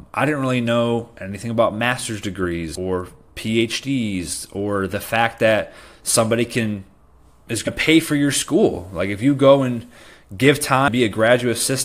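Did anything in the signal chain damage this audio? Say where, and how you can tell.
Yes. Three brief glitches cut into the speech, at 2.74 s right after "know anything about master's", at 7.66 s just before "pay for your school", and from 10.87 to 10.89 s after "you go and give". Each is a sharp, non-acoustic disturbance under about 20 ms. This points to damaged data in a compressed stream at the codec or storage stage. Corrupted bytes made the decoder misread those frames and lose sync before it found the next valid frame header.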